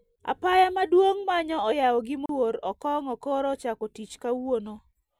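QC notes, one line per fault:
2.26–2.29 s, CD skip: just after "manyo oyao gi" the speech drops out for a brief mute of about 30 ms, then resumes from another point, because the laser jumped to a different turn of the disc's spiral and playback continued there.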